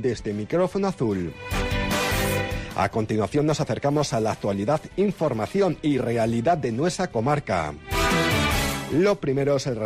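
Nothing stood out on listening; no technical fault could be heard anywhere in the recording.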